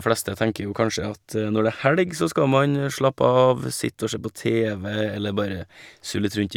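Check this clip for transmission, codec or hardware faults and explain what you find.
One codec fault in this speech: a corrupt frame decoded at 1.79 to 1.82 s. Damaged bits in a couple of frames got played anyway, throwing energy to wrong frequencies, so you hear a short squeaky blip around -20 dBFS.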